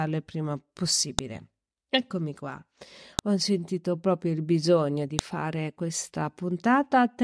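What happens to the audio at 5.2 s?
At 5.19 s, right after "proprio il bisogno di", there's a sharp, loud click: a file header played as audio. The stream seems to be joined from WAV pieces about 2 s long, and this piece's header bytes got decoded as samples, producing that snap regardless of the speech.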